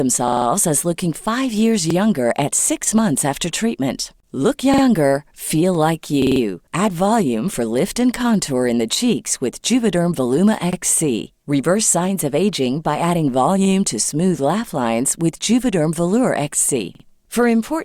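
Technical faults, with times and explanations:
0.28–0.46 s, 1.90–1.95 s, 4.74–4.83 s, 6.22–6.41 s, 10.73–10.77 s, 16.95–17.04 s: repeated buffer. A segment of about 46 ms, which fits a 2048-sample buffer, plays again when fresh audio arrives late, so the speech stutters before "as looking five years", before "younger at six months" and before "feel like". There are four extra plays at 0.28 s and 6.22 s, two at 4.74 s and 16.95 s, and one at 1.90 s and 10.73 s, with essentially no audio lost. On a waveform, identical blocks sit side by side with abrupt joins. A spectrogram shows the same pattern tiled, with a vertical seam at each join.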